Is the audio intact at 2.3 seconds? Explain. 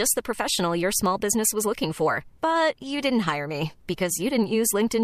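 Yes, the audio is intact at 2.3 seconds, with no dropout, click, distortion or other fault at that point.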